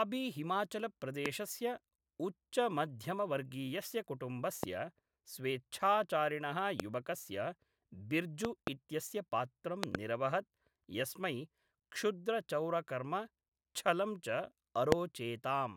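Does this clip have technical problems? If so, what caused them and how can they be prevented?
Yes. Loud pops land at 1.26–1.28, 4.63–4.66, 6.80–6.82 and 14.92–14.94 s, with double pops at 8.45–8.69 and 9.84–9.97 s, each about 15 to 25 dB above the speech. They were likely caused by voltage pulses from a connector, switch, static or driver glitch. On a waveform they show as tall spikes, and on a spectrogram as thin full-height vertical lines. Secure the cables, keep switches and connectors clean, and ground the equipment properly.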